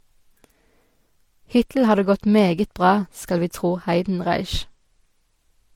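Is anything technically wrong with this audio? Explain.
Yes. Throughout the speech there is transcoding between lossy codecs, likely an MP3 encode followed by HE-AAC. Nothing remains above 18.5 kHz. Unlike a single low-bitrate encode, two artefact types overlap: MP3-style smearing and swirl sit under HE-AAC's synthetic, hissy top end, because the second encoder re-codes the first one's damage.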